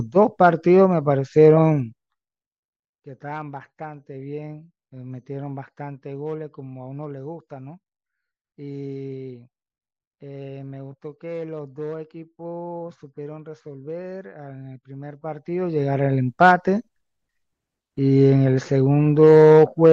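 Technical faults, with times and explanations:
1.66–2.40 s and 15.02–16.04 s, zipper noise: the level falls then rises about 20 dB in unsmoothed steps, about fifty a second, each clicking into a buzzy ticking.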